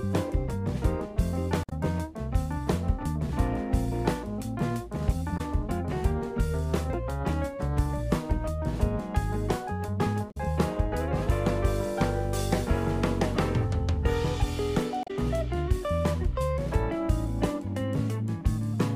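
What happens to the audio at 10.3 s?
At 10.28 s the audio breaks into a brief chirp, squawk, click or short hole that lasts until 10.37 s, roughly a tenth of a second. This is damaged data in a compressed stream. Part of the encoded data at that point is corrupt. The decoder cannot read those frames properly and loses its place. It then hunts for the next valid frame header. The garbled frames come out as that short glitch before normal decoding resumes.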